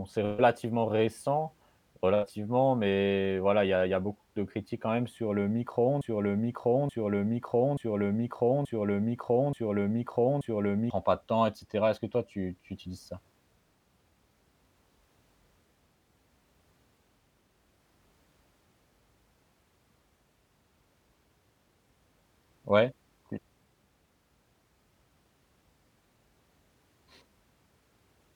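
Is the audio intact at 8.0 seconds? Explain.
No. At 8.0 seconds the audio sits inside a broken-record loop running from 6.01 to 10.90 s, after "quand même sur le". A fragment of 0.88 s repeats exactly, six times back to back. The likely cause is a stalled player or stream resending its last buffer. The speech that belonged there is lost, and it resumes at "pas de temps et".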